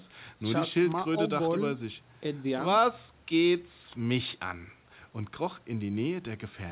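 Speech carried over a WebRTC call path, band-limited with nothing above 4 kHz as fits a G.711 mu-law codec at 64 kbps, with no faults to report.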